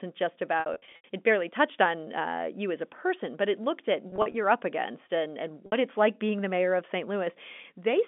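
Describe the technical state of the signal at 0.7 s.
At 0.7 s you're inside a stretch of packet loss with pitch repetition, running 0.6 to 1.04 s just before "it barely touched on". About 240 ms goes missing in bursts up to 80 ms. The receiver loops the last pitch period, so you get buzzy held bits fading to brief silence.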